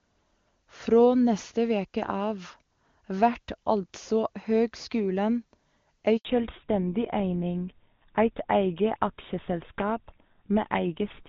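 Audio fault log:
6.17 to 6.25 s, handover gap: the call jumps between networks and for about 80 ms no speech frames come through, so the voice just cuts out and sits in silence until the new link picks up. Whatever was said in that slice is gone.
6.25 s to the end, fallback to narrowband: right after the switch the call drops from HD Voice (AMR-WB, which sounds clean at its top rate up to here) to an older narrowband codec, GSM full rate by the sound of it. Nothing survives above 4 kHz, so the voice goes dull and rougher.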